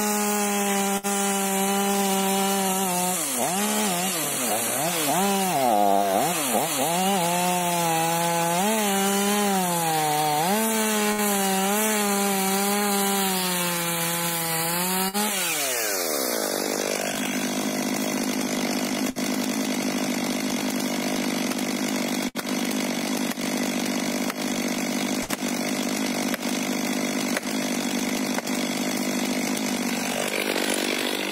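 The audio has six bursts of packet loss, at 0.97, 11.12, 15.08, 19.10, 22.28 and 25.23 s. At each one, about 60 ms of the stream never arrived in time for playback. The receiver covered the hole by extending the last sound it had for roughly 50 to 60 ms and letting it fade, so each gap sounds like a brief smeared hold. Playback then resumes slightly further on, with that 60 ms of material lost.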